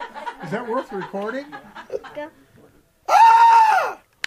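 No technical faults are audible.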